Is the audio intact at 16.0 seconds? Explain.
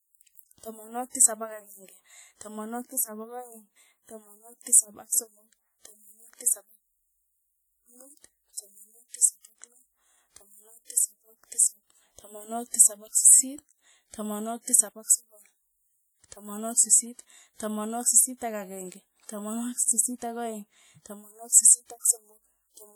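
No, at 16.0 s the speech carries the same ringing, washy smear heard through the whole clip, with a hiss that swells and fades with the signal. That's likely WMA compression: long transform blocks spread quantisation noise over tens of milliseconds, which fits a low bitrate of around 48 kbps.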